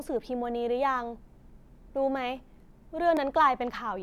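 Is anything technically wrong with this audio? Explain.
Yes. At 3.17 s the speech has a block of digital silence: a run of samples about 0.67 ms long is replaced by silence, which fits a 32-sample buffer the program didn't fill in time. The waveform drops straight to silence and jumps back with no fade, so the two edges merge into a single sharp tick rather than an audible hole. A gain dropout would instead soften or fade the level, and an isolated digital spike would add energy rather than leave a true gap.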